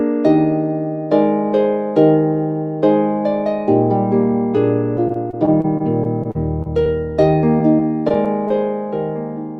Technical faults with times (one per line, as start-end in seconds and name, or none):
4.97-8.52 repeated packet loss (robotic sound)